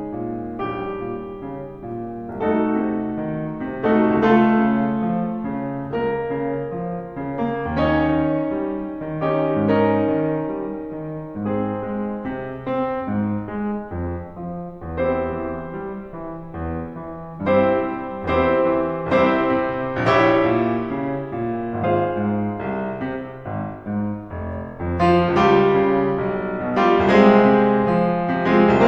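Compressed frames skipped at 2.79 s and 21.83 s: the decoder drops whole 23.2 ms frames, roughly one and then two. The music jumps ahead.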